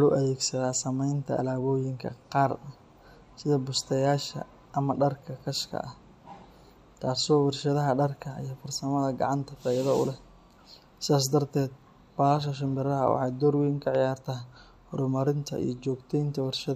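At 13.95 to 13.97 s, just after "waxay door weyn ka", a single loud pop sits on top of the speech, peaking a few dB above it. A voltage spike from a plug, switch or static discharge is the likely cause. The waveform shows a sharp isolated spike, and the spectrogram a thin vertical stripe spanning all frequencies.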